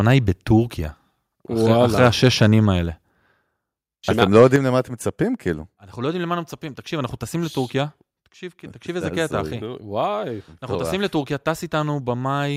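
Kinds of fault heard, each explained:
Microphone overload: Hard-flattened peaks give a harsh, crackling edge at 0.1–0.14 s, 2.0–2.54 s and 4.21–4.56 s, running about 1 dB, 3 dB and 3 dB past full scale. A small share of samples is cut, most likely because input gain was set too high for the converter.
Microphone volume stepped down: At 4.56 s, right after the last distorted peak, voice and background drop together by about 6 dB in a single step. This points to an automatic input-gain reduction triggered by the preceding clipping, which leaves the remaining speech noticeably quieter.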